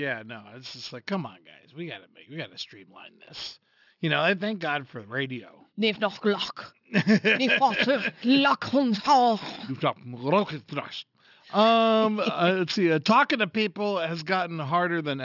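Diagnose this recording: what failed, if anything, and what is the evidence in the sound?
Aliasing throughout from unfiltered sample-rate conversion: sibilants turn gritty and metallic; a spectrogram shows folded energy, about 20 dB down, stopping hard at 6 kHz.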